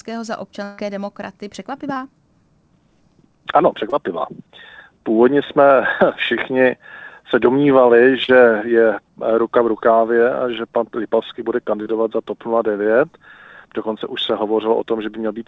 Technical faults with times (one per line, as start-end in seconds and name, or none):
0.64-0.80 burst of packet loss
1.94-1.98 short concealed packet loss
3.90-3.94 short concealed packet loss
8.24-8.30 short concealed packet loss
11.82-11.88 short concealed packet loss